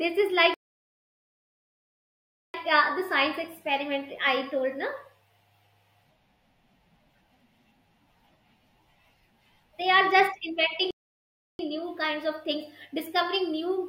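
The player likely ran short of data or had its thread blocked, causing two playback stalls in this speech. From 0.54 to 2.54 s the output drops to silence for a full 2 s, then resumes with "uh the science experiment". At 10.91 s, right after "are just", it cuts out again for about 0.68 s and comes back at 11.59 s on "new kinds of". Each time the speech halts abruptly mid-flow.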